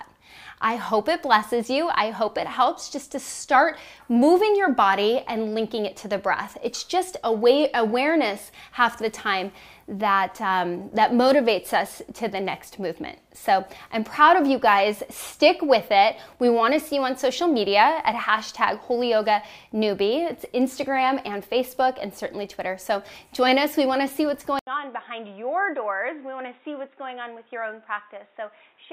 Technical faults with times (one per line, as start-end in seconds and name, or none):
24.59-28.92 input switched to a poorer device